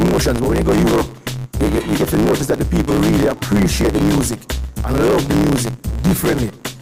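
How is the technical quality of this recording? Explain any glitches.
The recording has one persistent fault running through its entire length.

A block size mismatch (truncated) is present throughout. Each block is cut short before it reaches the next stage, and the tail is discarded. That produces a steady 109 Hz buzz at the block rate, which fits 512-sample blocks being written. The audio plays 1.16 times fast at roughly its original pitch.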